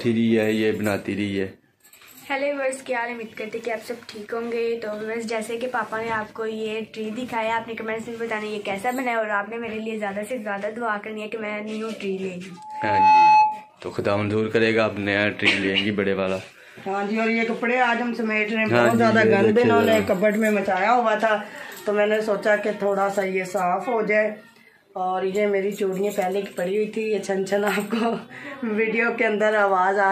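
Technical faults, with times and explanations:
12.57–13.72 s, loudspeaker feedback squeal: the microphone picked up its own loudspeaker, and at 856 Hz the loop gain rose above one, so that tone fed itself and grew in about half a second into a steady squeal standing roughly 10 dB above the sound.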